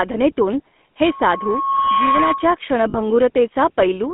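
Speech, run through the GSM full-rate codec the whole way, with that buzzy, gravelly roughness and a narrow line band of about 200 Hz to 3.5 kHz, consistent with a 13 kbps phone call. From 1.04 to 2.59 s there's loudspeaker feedback squeal, a 1.1 kHz tone swelling over roughly a second to around the level of the speech as the mic-speaker loop runs away. Then at 2.90 to 2.95 s come lost GSM frames, a 40 ms metallic, ringing hold where the decoder repeated the last good frame, which fits two dropped 20 ms frames.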